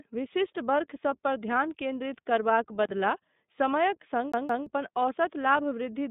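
Throughout, the speech passes through the iLBC codec, coding each frame independently. The band is held to roughly 150 Hz to 3.7 kHz, which fits its 20 ms, 15.2 kbps mode, and leaves plainly audible roughness and a synthetic edge. From 2.83 to 2.89 s, just after "केन्द्रित करबाक", an intermittent contact opens the line for about 34 ms, so the sound drops out with crackle at both edges. From 4.32 to 4.67 s, just after "समयक सङ्ग", the CD is stuck on one turn. The laser jumps back to replay the same 173 ms slice twice, giving a quick, even stutter with brief mutes at each jump.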